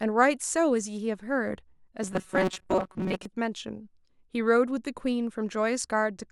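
Speech, with robotic sound from repeated short buffers between 2.03 and 3.25 s: a rigid metallic buzz at 188 Hz, likely from roughly 5.3 ms chunks looping over most of the stretch. Unlike codec warble, the buzz stays at one fixed pitch.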